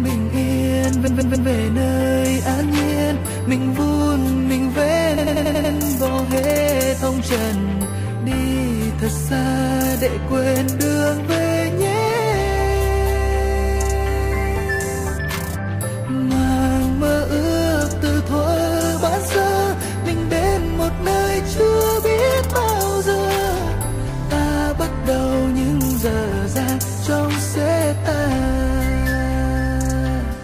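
At 1.06 to 1.48 s, repeated frames replay a 129 ms block three extra times, and at 5.17 to 5.73 s a 93 ms block plays six more times, stuttering. A spectrogram shows identical tiles.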